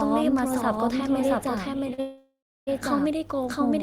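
A doubled audio track runs through the whole clip: a second full-band copy of the speech trails the first by roughly 0.7 s at about the same level, with no decay or room colour. This is likely a second capture on a slower path or two out-of-step copies in an edit.

A short stall from a late packet comes at 1.94 to 2.00 s. A packet arrived late, the jitter buffer emptied, and the receiver stretched the last sound for 42 ms before resuming, so a sound is held too long with a slight buzz or dip and nothing is lost.

A call audio freeze follows immediately, from 2.00 to 2.69 s. Packets were likely held up in transit and the buffer ran dry again. The last sound continues as a buzz or hiss that fades, then about 320 ms of silence, before the speech resumes where it stopped. The result is a 669 ms gap inserted into the audio rather than missing material.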